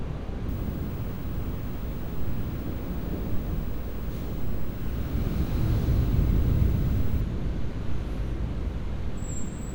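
An everyday sound recording carrying video or display buzz from 0.49 to 7.21 s: a screen or video cable couples a 50 Hz field-rate buzz with hash above it, plus a thin 15.6 kHz line tone, roughly 20 dB below the signal. A spectrogram shows stacked 50 Hz harmonics and a steady line at 15.6 kHz.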